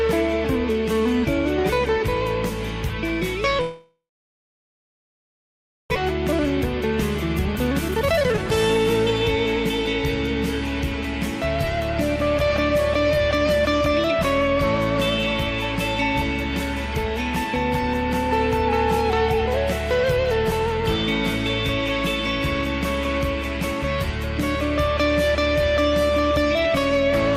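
The audio cuts out at 3.61 s and resumes at 5.98 s. A brief fading continuation gives way to about 1.9 s of silence, and roughly 1.6 s of sound is lost, likely from a long network dropout. A jitter buffer speed-up then plays 7.74 to 8.52 s at 159% speed and 12.27 to 13.89 s at 107%, removing about half a second and 0.15 s respectively of short pitch-period pieces at unchanged pitch.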